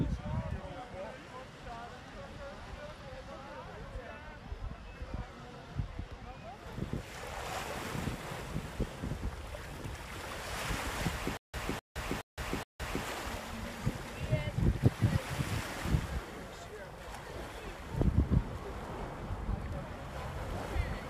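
From 11.37 s to 13.05 s there is a stutter with silent gaps: a 254 ms fragment repeats four times, each followed by 166 ms of silence, on a 420 ms cycle, likely a stalled stream replaying its last buffer. The waveform shows identical blocks separated by flat gaps.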